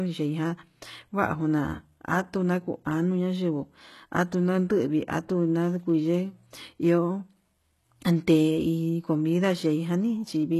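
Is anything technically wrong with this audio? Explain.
Yes. Throughout the speech there is heavy codec damage, most likely from HE-AAC compression at a very low rate, which fits roughly 16 kbps. The treble is not coded directly but rebuilt from copied lower bands under a coarse envelope, so s sounds come out gritty and lispy with a metallic edge. Nothing reaches above 12.3 kHz. A plain low-pass would sound dull, but here the top stays bright while its texture fails to match the body of the sound.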